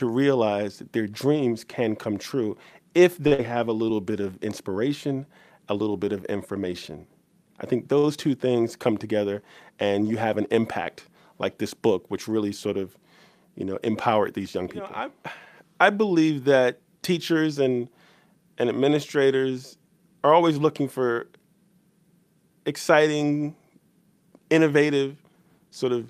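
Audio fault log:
3.27–3.33 s and 7.99–8.05 s, short stall from a late packet: the last sound is held for about 40 ms and then 48 ms while a packet arrives late. Playback then resumes exactly where it paused, so nothing is skipped. Unlike a loss, it only adds delay.
3.33–3.40 s, burst of packet loss: right after the first stall, the sound is carried on for about 50 ms and fades with a held, buzzy or hissy tail. The audio then jumps ahead, and about 60 ms of material never plays. The skip separates it from a stall.
25.06–25.92 s, jitter buffer speed-up: the buffer holds more audio than its target, so tiny pitch-period slices are removed repeatedly, around a tenth of a second in total. This passage runs at 109% speed with the pitch unchanged, so it sounds hurried rather than raised.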